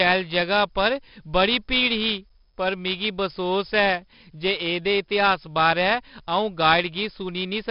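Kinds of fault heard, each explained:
4-bit ADPCM compression: Each sample is stored as a small 4-bit step from a predicted value, so the leftover error comes out as broadband grit that rises and falls with the speech. The damage here is heavy, giving a rough, hissy texture on the louder parts throughout. Nothing sits above about 5.3 kHz, so the speech also sounds dull and boxed-in, which fits a sample rate near 11 kHz at this 44 kbps.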